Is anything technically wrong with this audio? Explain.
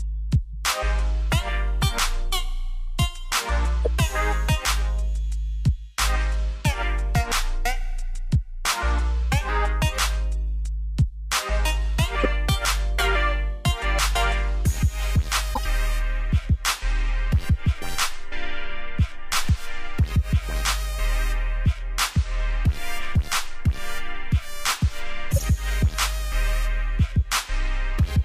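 Yes. Corrupt frames were decoded at 0.53 s, 3.85–3.87 s, 12.20–12.26 s, 15.54–15.65 s and 25.31–25.48 s. Damaged bits misplace energy across the spectrum, giving short chirps or noise bursts, faint at 0.53 s, loud elsewhere, and several frames long by the final event.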